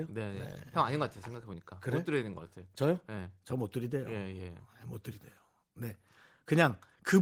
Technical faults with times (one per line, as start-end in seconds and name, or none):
none